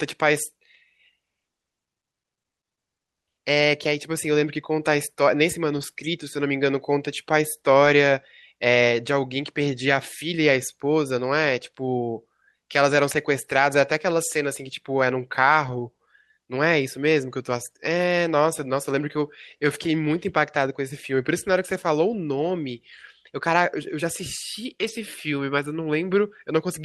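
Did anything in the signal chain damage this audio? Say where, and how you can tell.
Yes, network: lost packets rebuilt from error correction at 5.73–5.83, 13.11–13.17, 15.67–15.81 and 24.83–24.89 s. Rough, noisier low-bitrate copies fill the losses, so there is no silent gap or smeared concealment.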